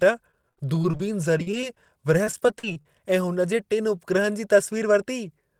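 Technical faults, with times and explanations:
0.31–2.86 s, repeated packet loss (robotic sound): packets kept dropping, leaving gaps up to 41 ms patched by repeating earlier audio, so speech turns choppy with pieces missing.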